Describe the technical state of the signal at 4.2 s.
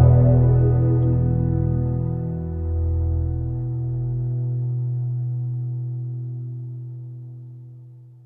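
At 4.2 s the signal is intact, with no audible technical fault at that moment.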